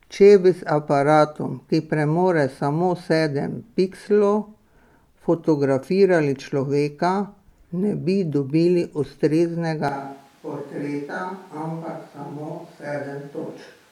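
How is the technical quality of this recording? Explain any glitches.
One clear problem: a sudden change of pickup near the end.

From 9.88 s to the end, the speech turns roomy and hollow, thinner in the bass, about 5 dB quieter, with room noise rising to roughly 25 dB below the voice. The likely cause is a switch to a distant microphone after the close microphone's signal dropped out.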